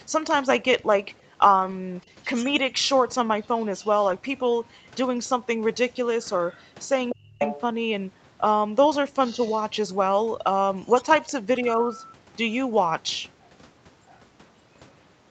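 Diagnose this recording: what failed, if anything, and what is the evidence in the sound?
Network stage, lost packet rebuilt from error correction: short patches of rougher, noisier speech with no gap at 1.47 to 1.73 s, 4.07 s, 6.15 s, 11.79 s and 12.73 to 12.87 s. The longest, at 1.47 s, holds about 140 ms of rebuilt audio, which fits a run of seven 20 ms packets, and the one at 12.73 s about 80 ms. Opus in-band FEC filled each hole from the low-bitrate copy carried in the next packet, so playback stays continuous but coarser.

Call processing, other side's voice leaking through: a faint second voice runs under the talker at 2.01 to 2.25 s (about 35 dB down), 3.81 to 3.88 s and 5.9 to 6.62 s (about 30 dB down), and 9.26 to 9.58 s (about 20 dB down). At 7.1 to 7.61 s it comes up to nearly the talker's level, only about 5 dB below. The likely cause is loudspeaker playback reaching the microphone and the echo canceller leaving part of it in place.

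Call processing, speech suppressed in double talk: from 7.11 to 7.4 s, while that loud leaked voice is present, the talker's own speech sinks steeply, by as much as about 35 dB, across roughly 300 ms, and then recovers. Both voices overlap here, and the echo canceller likely couldn't separate the near talker from the echo, so it turned both down together rather than removing only the echo.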